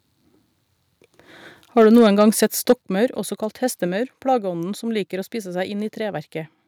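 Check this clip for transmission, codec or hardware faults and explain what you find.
Two faults show up, both on the microphone side.

From 1.77 to 2.73 s there is microphone overload. Peaks run about 4 dB past full scale, likely because the input gain is set too high. The flattened tops on a small share of samples give the loudest moments a harsh, crackling edge.

The microphone volume is stepped down twice. At 1.82 s the level falls by about 2 dB, and at 2.82 s, just before "også kalt", it drops by about 7 dB. This is likely automatic gain control in the call software reacting to the clipping. Sound and background both get abruptly quieter each time.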